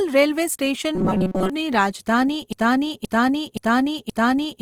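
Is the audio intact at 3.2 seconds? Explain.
No. At 3.2 seconds the sound sits inside a broken-record loop that runs from 2.53 s to the end. The playback likely stalled and kept resending its last held fragment, so a 0.52 s piece repeats exactly, back to back, four times, and the speech that belonged there is lost. A waveform shows the same 0.52 s shape copied edge to edge, and a spectrogram shows identical blocks recurring at that interval.

The speech also has a plainly audible grainy, rough, noise-tinged texture throughout, including this moment. That is likely Opus compression in its music (CELT) mode, at a rate that fits about 24 kbps with full bandwidth. On a spectrogram the bands stay filled but their fine detail turns to noisy speckle instead of clean harmonic lines.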